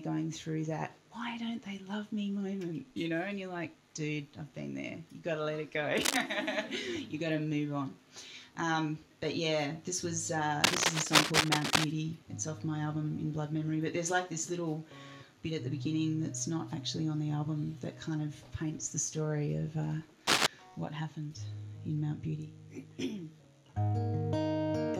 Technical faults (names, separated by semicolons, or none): cable scratch noise